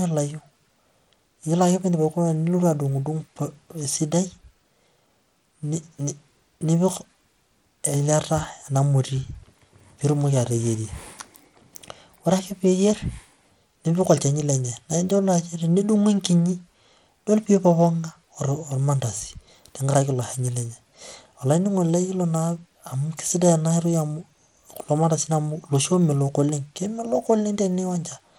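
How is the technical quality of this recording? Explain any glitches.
The technical quality is noticeably compromised by lossy compression across the whole recording. From start to finish, the speech carries damage that sounds like Bluetooth SBC compression, most likely from a low-bitrate link, with the grit pointing to something around 96 kbps. SBC divides the signal into a few wide bands and shares out very few bits, so the upper bands starve and the rest are coarsely quantised. The treble flickers in and out, and a gritty haze rides on the voice. On a spectrogram the top region appears patchy and blocky, with energy switching on and off in broad horizontal strips.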